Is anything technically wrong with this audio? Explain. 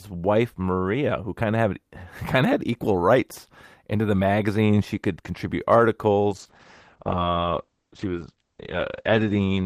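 Yes. A call bitrate drop starts at 6.31 s and lasts to the end. The bandwidth estimate fell, so the encoder coded more coarsely. It sounds like a fall from 32 to 9 kbps. The top band shrinks from 20 kHz to 8 kHz. The speech turns muffled and rough, worst for about 2.8 s.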